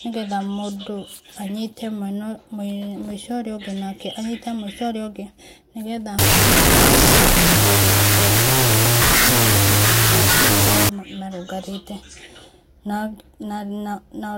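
From 6.19 s to 10.89 s, after "ũngĩ nĩgetha", the speech becomes loud noise with the original buried underneath, at half speed and an octave low. This wrong sample width fault fits 16-bit data read as unsigned 8-bit, splitting each sample into two values.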